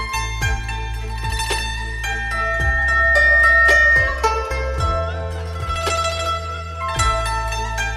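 The audio carries loudspeaker feedback squeal from 1.13 to 4.41 s. A single tone at 1.8 kHz swells over roughly two seconds. It ends up about 10 dB louder than the sound. A microphone is picking up its own loudspeaker, and the loop gain exceeds one at that frequency.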